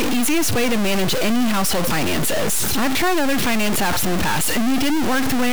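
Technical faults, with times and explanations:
Throughout: stuck bit. The speech carries a harsh, buzzy distortion from start to end, and the gaps between phrases are filled with a loud noise floor rather than silence. This most likely comes from one data bit held at a fixed value by a faulty line or converter. Roughly half of the samples are pushed off by that bit's weight, a step of around -15 dBFS, so the error follows the waveform and grates audibly. Near zero the bit flips with the sign of small values, which produces the noise in the pauses.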